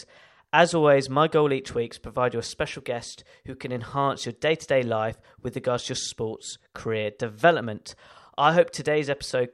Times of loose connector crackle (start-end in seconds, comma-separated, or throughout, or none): none